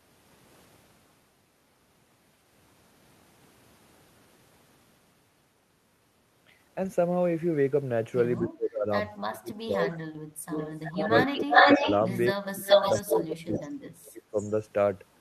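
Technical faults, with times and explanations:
8.39–8.88 s, 9.26–10.54 s, 11.03–11.87 s, 12.34–12.67 s and 13.01–14.37 s, speech suppressed in double talk: the speech sinks in patches, cutting out almost completely in the deepest dips (around 30 to 35 dB down) and only thinning near 11 s. The likely cause is an echo canceller treating the overlap of both sides as echo and ducking everything. On a spectrogram the speech energy fades in blocks. On the waveform the envelope collapses abruptly and then recovers.
10.52–13.16 s, 13.53–13.62 s and 14.38–14.51 s, echo leak: a copy of the speech returns 345 ms late. In the long stretch it is about 5 dB louder than the speech itself. In the two short scraps it is faint, and fainter still at 14.4 s. This is likely loudspeaker pickup that the canceller failed to remove. A spectrogram shows repeated formant patterns offset by about a third of a second, and the waveform shows a smeared, doubled envelope.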